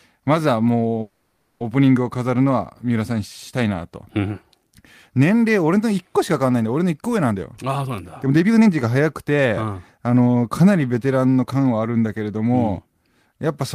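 From 1.01 to 1.62 s the speech stalls into a fading buzz or hiss and then resumes where it stopped. This is a call audio freeze, likely from delayed packets emptying the jitter buffer. From 7.31 to 10.51 s the speech runs hurried at about 119% speed with unchanged pitch. This jitter buffer speed-up comes from repeatedly cutting pitch-period slices, roughly 0.7 s in total, to shed the built-up delay.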